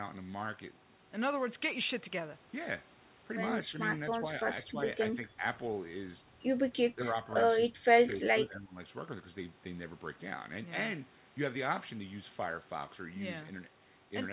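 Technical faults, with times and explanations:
3.67–3.73 s, 3.92–4.24 s, 4.66–4.77 s, 5.12–5.44 s, 6.95–7.05 s and 7.66–8.78 s: speech suppressed in double talk. The speech keeps ducking in short patches, shallow dips of about 5 dB at first, deeper around 10 dB by 5.1 s, then a proper hole of about 20 dB through most of the last stretch. It's likely the echo canceller mistaking this side's talk for the loudspeaker echo and turning everything down, on top of a call path that already stops at 4 kHz.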